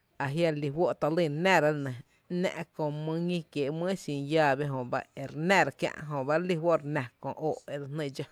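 Nothing stood out as a technical fault on listening to this speech recording.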